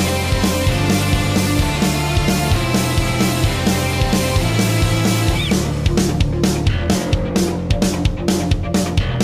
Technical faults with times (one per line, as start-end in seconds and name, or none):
none